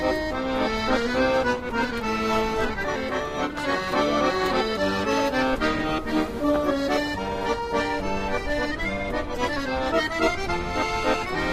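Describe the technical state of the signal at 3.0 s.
A skip ahead occurs at 2.95–2.97 s. About 0.7 s of sound was dropped while later audio waited. Playback jumps forward with no gap, joining both sides almost directly.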